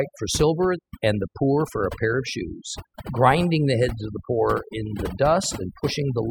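Throughout the speech, overdone noise removal is audible: the reducer pulls individual frequency bands down hard whenever they sit near its noise estimate, taking quiet speech detail with them. The background in pauses drops, breaking into twinkling specks.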